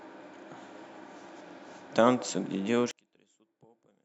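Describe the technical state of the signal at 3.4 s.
At 3.4 s the speech has collapsed by about 37 dB to a faint residue, from 2.91 s to the end at 4.04 s. The likely cause is one channel inverted: reversed polarity cancels the shared centre content when the channels sum to mono.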